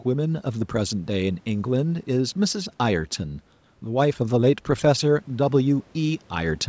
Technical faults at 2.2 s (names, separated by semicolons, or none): none